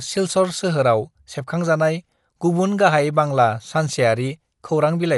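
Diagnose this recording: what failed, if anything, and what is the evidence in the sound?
Throughout the speech the sound is dull and band-limited, with nothing above 11.4 kHz, and a rough, fluttering noise clings to the voiced tones. This points to the codec stage, likely Dolby Digital compression at a starved rate, which fits a bitrate around 64 kbps. The encoder narrowed the band and left many frequency lines without mantissa bits, and the decoder filled those gaps with dither noise, producing the plainly audible roughness.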